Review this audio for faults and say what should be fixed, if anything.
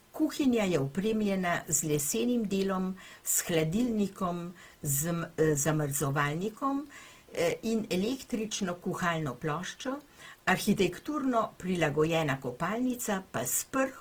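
Across the whole clip the speech sounds grainy and rough, with a hiss-like fizz riding on the voiced parts, and the damage is plainly audible. That's likely Opus compression running in its music (CELT) mode. At a rate that fits something like 16 kbps, the encoder keeps each band's energy but fills the detail with noise or folded copies of lower bands, so you get coarse texture rather than swirly holes. Content still reaches about 20.2 kHz. Re-export from the original source at a much higher bitrate, or let the encoder use a speech-oriented mode at this rate.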